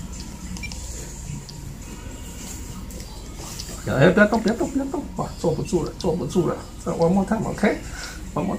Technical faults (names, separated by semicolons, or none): DAB burbling